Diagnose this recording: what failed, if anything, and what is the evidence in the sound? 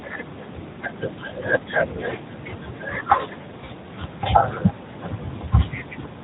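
Two brief dips or warbles interrupt the speech, at 0.44–0.47 s and 3.66–3.70 s. These are lost AMR speech frames at the network stage. Each gap fits a single 20 ms frame failing its checksum. The decoder filled it by repeating the last pitch and vocal tract settings at lowered gain, so the gap sounds smeared rather than silent.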